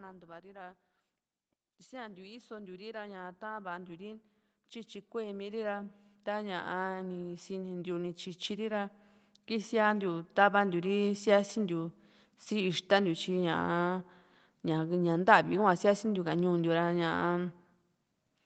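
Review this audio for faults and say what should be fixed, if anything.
Automatic gain rising is heard twice. From 1.89 to 4.27 s the level climbs by about 6 dB. From 5.11 to 11.09 s it climbs again, by about 14 dB. The gain control judged the input too quiet and raised it slowly, so the speech and the background swell together. The audio stays band-limited to about 8 kHz by the call path. To prevent it, set the input level correctly at the source, or use a gentler automatic gain setting.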